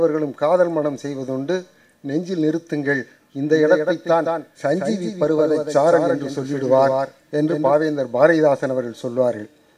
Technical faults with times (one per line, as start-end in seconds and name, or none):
3.51-7.73 doubled audio track